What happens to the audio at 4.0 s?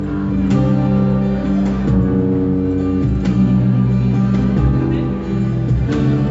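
Nothing goes wrong at 4.0 s; the audio runs through that moment intact, with no dropout, click or other fault.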